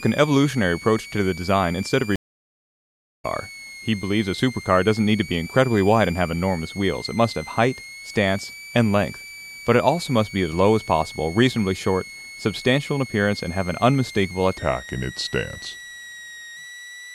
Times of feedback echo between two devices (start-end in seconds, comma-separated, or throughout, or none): none